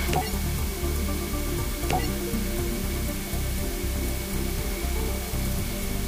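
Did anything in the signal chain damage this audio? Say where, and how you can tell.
Yes, at sample-format conversion: a steady, even hiss sits about 10 dB under the sound throughout, with no distortion. That's low bit depth with dither, roughly 5 bits.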